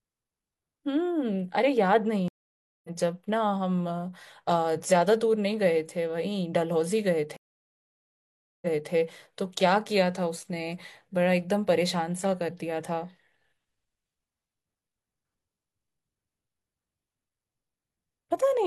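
At 2.28 s the speech drops out for 0.56 s and resumes roughly a third of a second further on, with that stretch missing. At 7.36 s a 1.26 s gap ends with the last 0.3 s repeated, ending at 8.92 s. Both are stream reconnects: the connection broke, and a fresh decoder rejoined the stream at a different point.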